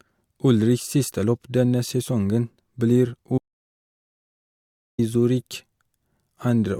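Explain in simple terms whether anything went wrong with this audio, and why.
At 3.38 seconds the speech stops dead, and nothing comes back until 4.99 seconds. That is an audio dropout to silence lasting about 1.6 seconds. The gap is total silence, with no room sound. Most likely the input signal was briefly lost, so that stretch is gone.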